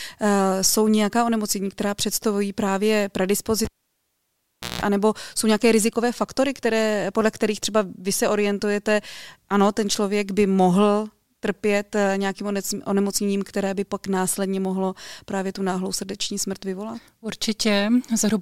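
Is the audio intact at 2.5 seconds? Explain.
Yes, the speech at 2.5 seconds plays through intact, with no dropout, click, distortion or other fault at that moment.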